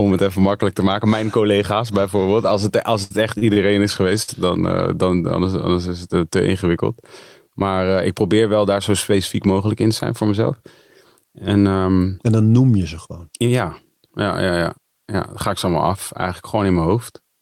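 Short stalls from late packets occur at 3.03–3.12 s after "het als", 3.38–3.43, 3.53–3.58 and 4.22–4.30 s before "dan eh dan anders". The buffer ran empty, so sound is held for 29–71 ms. A jitter buffer speed-up at 14.22–14.79 s, before "ja dan ga ik", trims roughly 50 ms of pitch periods, and the speech runs about 8% faster at unchanged pitch.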